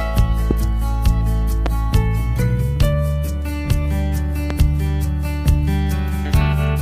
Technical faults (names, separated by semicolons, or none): loud pop